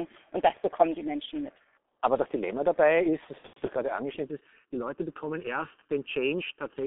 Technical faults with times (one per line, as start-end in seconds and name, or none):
0.00-6.86 G.723.1 codec
3.38-3.70 VoIP packet loss concealed by the speech codec
4.24-6.86 channel delay (comb filtering)